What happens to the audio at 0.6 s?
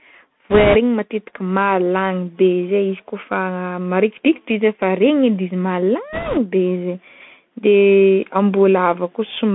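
At 0.6 s the sound is inside a short burst of bit errors on a Bluetooth voice link, running from 0.50 to 0.77 s. Flipped bits on the CVSD headset stream each nudge the signal by one small step, and the decoder soon recovers, so there are no sharp clicks. The result is a rushing, crackly noise laid over the sound. The bit error rate is about 7 percent. On a spectrogram it shows as a broadband speckled haze filling the band for about a quarter second. The waveform looks roughened rather than spiked.

This passage also carries the Bluetooth CVSD headset codec. The codec tracks the waveform one up-or-down bit at a time, with an adapting step, which fits a 64 kbit/s CVSD link. Here the speech is confined to roughly 150 Hz to 3.5 kHz. Fast, loud high content outruns the step and distorts. S sounds turn scratchy, and a granular hiss sits underneath. A spectrogram shows a hard ceiling at 3.5 kHz with grainy texture throughout the passband.

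Gain pumping is present as well, with a swing of about 5 dB. This is likely a fast limiter or compressor working against gain set too high. On the waveform the envelope looks flattened, with loud and soft parts packed close together.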